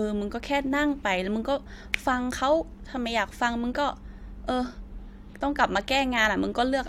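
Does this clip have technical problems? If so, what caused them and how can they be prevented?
No, this speech clip shows no audible technical faults, so there is nothing to trace or prevent.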